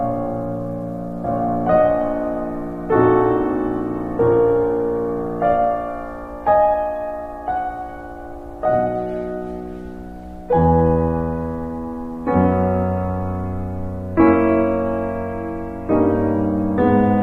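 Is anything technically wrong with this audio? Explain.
No, nothing technically wrong turns up in this music; it sounds just as it should the whole way through.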